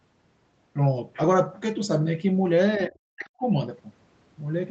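From 2.76 to 3.44 s the speech gets pushed way down, by around 40 dB at its deepest, for roughly 0.7 s. That's speech suppressed in double talk, most likely the echo canceller mistaking the talker for loudspeaker echo and ducking both. The audio tops out at 8 kHz throughout, consistent with a band-limited Opus call path.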